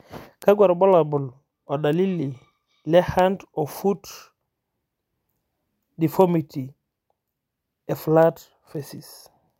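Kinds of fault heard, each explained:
Word clock ticks: an unlocked digital clock slips about every 0.3 s, dropping or repeating one sample, giving sharp regular clicks across the speech, seen as thin vertical spectrogram lines.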